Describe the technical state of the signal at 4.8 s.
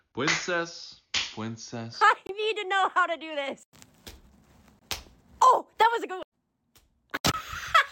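At 4.8 s there is a gap between chunks: the signal drops to silence from 4.79 s to 4.82 s, a hole of about 23 ms. The audio was delivered in 2.5 s chunks, and at this join silence is left between segments, leaving dead air between them. Nothing is removed from the material itself; it is pushed back and interrupted. The result is a brief hole in the sound.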